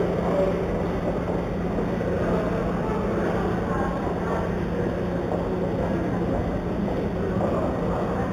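Right from the start and all the way through, there's imaging from linear upsampling. The top end sounds dulled, and a faint metallic shimmer sits above it, which fits audio that started life at 8 kHz and was raised to 48 kHz by joining samples with straight lines. That's a weak filter, so mirrored copies of the spectrum leak through, the first between 4 and 8 kHz, roughly 35 dB below the sound.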